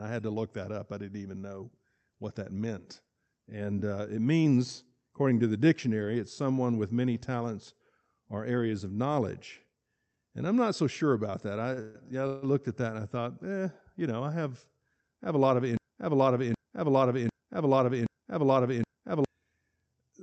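Speech, carried over a call link whose high end stops near 8 kHz, consistent with Opus at around 48 kbps. At 11.73 s there is a short stall from a late packet. One sound is held for about 39 ms, ending at 11.79 s. The packet came in behind schedule and the jitter buffer ran dry. The receiver stretched the last sound until the packet arrived, then resumed from the same spot. Nothing is lost. The held sound just lasts a little too long.

Two call audio freezes follow closely. The first runs from 11.81 to 11.96 s and the second from 12.27 to 12.44 s. In each, the last sound carries on as a fading buzz for roughly 0.13 and 0.16 s. Neither drops to silence. Packets were likely held up in transit, which emptied the buffer. Once they arrived, the audio picked up where it had stopped. So each freeze inserts a pause, and nothing is missing.

From 15.77 to 19.25 s there is a broken-record loop. A fragment of about 0.77 s repeats back to back, five times in a row. 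The player or stream likely stalled and kept resending the last piece it held. The audio that belonged in those three and a half seconds is gone.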